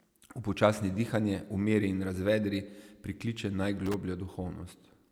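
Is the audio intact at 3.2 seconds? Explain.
Yes, the audio at 3.2 seconds is intact, with no dropout, click, distortion or other fault at that moment.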